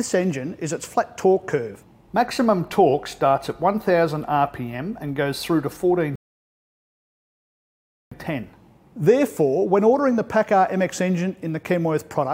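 At 6.16 s the audio drops abruptly into silence and stays there until 8.12 s, a rebuffering stall of about 1.96 s. The player exhausted its downloaded audio and paused until more data arrived, then picked up exactly where it left off, so nothing is skipped, only delayed. On a waveform this shows as a flat line; on a spectrogram, a clean vertical gap with matching content on either side.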